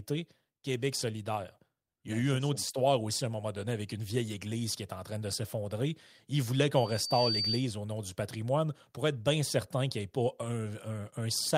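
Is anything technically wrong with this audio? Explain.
Yes. From 6.75 to 7.68 s, just before "au nom du patrimoine", there is loudspeaker feedback squeal. The microphone is picking up the loudspeaker it feeds, and at about 4.6 kHz the loop gain exceeds one, so that single tone feeds on itself and swells over roughly half a second until it is about as loud as the speech. The swell marks it as feedback: a steady interfering whistle or hum would start at full level and hold there.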